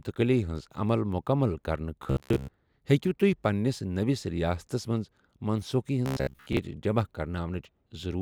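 From 2.03 to 2.53 s and 6.06 to 6.59 s, speech becomes a rigid metallic buzz at 67 Hz. This is robotic sound, likely from repeated 15 ms buffers.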